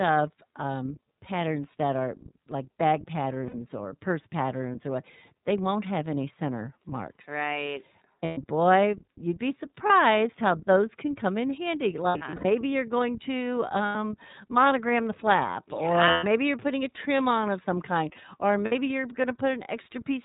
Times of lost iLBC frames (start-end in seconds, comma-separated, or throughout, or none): 3.47-3.55, 8.25-8.38, 9.86-9.91, 12.09-12.45, 13.86-13.96, 16.10-16.24, 18.65-18.73